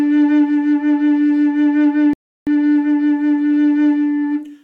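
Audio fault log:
2.13–2.47 s, rebuffering stall: the player drained its store of downloaded audio before the next portion of the stream had arrived, so playback halted and waited for data. In the music this comes through as an abrupt drop to silence lasting about 335 ms, after which the music picks up at exactly the point it broke off. No material is skipped or repeated; the gap simply inserts extra time and interrupts the rhythmic flow.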